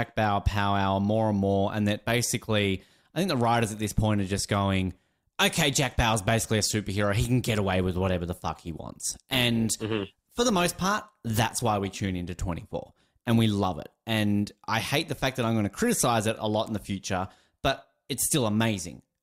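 From 7.41 s to 13.41 s the speech abruptly degrades, with more smearing and warbly codec artefacts, then snaps back just as suddenly, with no gap at either edge. This is an adaptive stream at a lower bitrate: for those six seconds the player switched to a leaner version of the stream while the connection slowed. The change in quality fits a step down from 64 to 32 kbit/s Opus.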